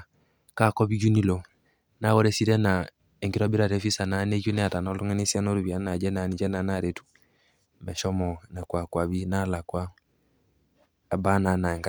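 No technical faults can be heard anywhere in the recording. There is nothing here that needs a timestamp or a closer listen.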